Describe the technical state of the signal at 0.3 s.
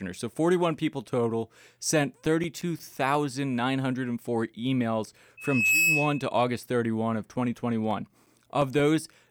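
Nothing is wrong with the signal at 0.3 s; the speech passes through intact at that point.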